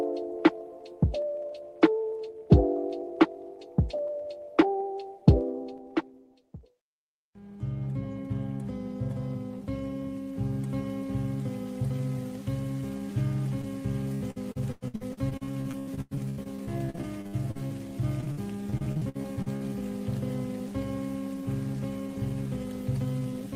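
Short concealed packet loss at 13.61 to 13.65 s: about 20 ms of audio arrived too late to decode, so the receiver extended the preceding sound to cover the hole and then blended back into the real signal, leaving a brief smear or wobble.

Repeated packet loss (robotic sound) follows from 14.15 to 17.72 s and again from 18.21 to 19.62 s. Dropouts arrive in quick succession, each patched by stretching the last sound. Concealment covers about a third of the first stretch, with gaps up to 102 ms, and a little over a quarter of the second, with gaps up to 60 ms. The result is choppy audio with pieces missing.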